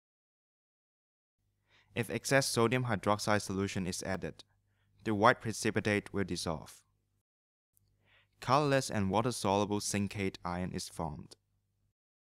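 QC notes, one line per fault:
4.15 s and 9.13 s: audio missing between chunks. Each point has a brief skip where about 10 ms of sound vanishes and the two sides butt together with no silence. The 5 s spacing likely points to chunked processing dropping audio at each handover. The waveform shows an abrupt discontinuity at each point.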